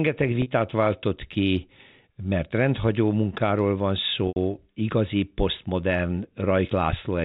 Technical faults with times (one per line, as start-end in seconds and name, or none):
0.42-0.46 packet loss with pitch repetition
4.28-4.36 packet loss with pitch repetition